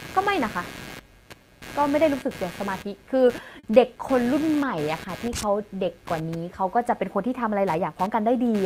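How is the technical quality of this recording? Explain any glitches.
The technical quality is compromised by two faults: a persistent interference noise and one brief stall.

Computer activity noise runs through the whole recording. Changing load in the computer's processor, graphics or peripherals disturbs the ground shared with the audio circuitry, injecting a pulsing interference at roughly 150 Hz. It sits around 20 dB below the speech as a buzzy, scratchy layer whose intensity follows the machine's activity rather than the talking.

A short stall from a late packet occurs between 3.59 and 3.65 s. A network packet missed its deadline, the jitter buffer emptied, and the receiver stretched the preceding sound for about 40 ms until the data turned up, then carried on from the same point. No speech is lost, but that moment is audibly held, and everything afterwards runs about 40 ms later.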